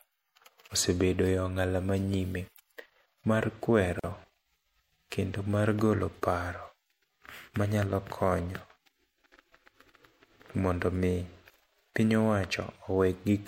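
A speech clip with one gap at a join of encoded pieces: from 3.99 to 4.04 s, a gap of about 42 ms cuts into the talking, edges smeared, then it picks up right where it left off. Separately encoded chunks were butted together with their encoder delay and end padding left in.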